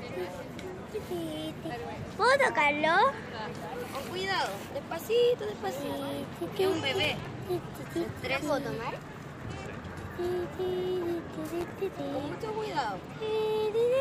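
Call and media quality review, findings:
Processor overload crackle, 7.04–7.27 s and 11.61–11.72 s. Gritty crackle bursts, longer first. Probable component: audio processing thread. Repeated missed buffer deadlines, each very short slot refilled with stale audio, hard edges at every splice; ceases when load drops.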